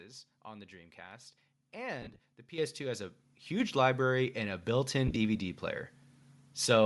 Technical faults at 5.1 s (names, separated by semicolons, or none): Bluetooth LC3 compression; lost LE Audio frames